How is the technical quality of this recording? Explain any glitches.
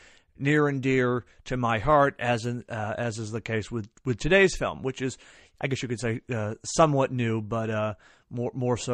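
No audible glitches or faults.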